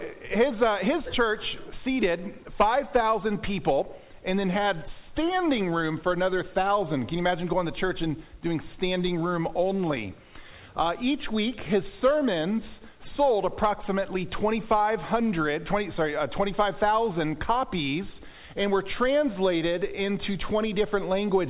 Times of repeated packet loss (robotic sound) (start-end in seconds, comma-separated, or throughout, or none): none